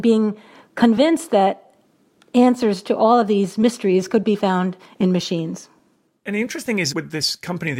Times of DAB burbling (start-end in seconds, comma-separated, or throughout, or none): none